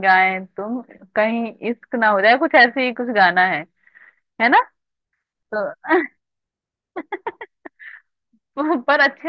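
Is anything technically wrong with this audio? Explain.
No, nothing is technically wrong.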